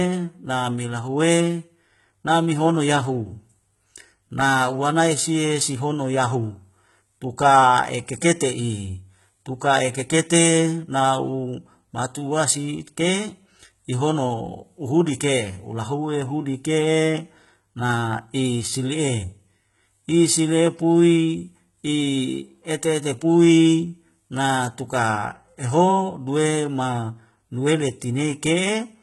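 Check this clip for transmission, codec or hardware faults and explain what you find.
One codec fault runs through the whole recording: the speech was likely squeezed through HE-AAC compression at a very low bitrate, and the heavy damage fits something near 16 kbps. The encoder spent its bits only on the lower spectrum and synthesised the treble by copying lower bands upward under a coarse envelope, with nothing at all above 11.8 kHz. The top end stays bright but its harmonics no longer match the voice beneath, so sibilants come out gritty, metallic or lispy from start to finish.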